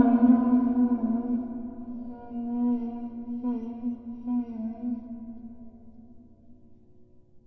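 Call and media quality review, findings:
Whole clip sounds drastically slowed and deep: running at about 0.36x speed, pitch dropped roughly 17.6 semitones, both shifted together. Wrong sample rate, playback path. No resampling; ratio fits 44.1 kHz material clocked out at 16 kHz.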